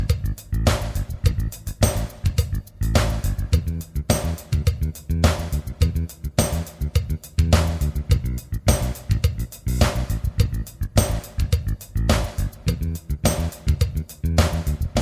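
No technical faults can be heard anywhere in the audio; the signal holds steady with nothing breaking into it at any point.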